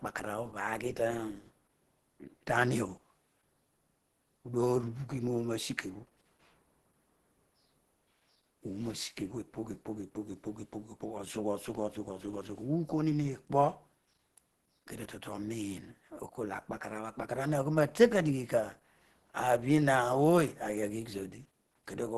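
Throughout the speech, plainly audible damage is present. Nothing sounds above 12.2 kHz. The sound is muffled, hoarse and grainy. The likely cause is Opus compression in its hybrid speech mode. The narrowed band and roughness fit a low bitrate, around 16 kbps.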